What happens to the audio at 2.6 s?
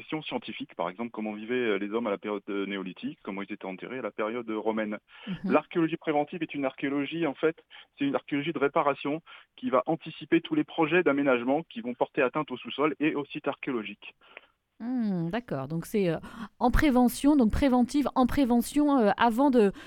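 Nothing goes wrong at 2.6 s; the audio plays through that moment intact, with no dropout, click or other fault.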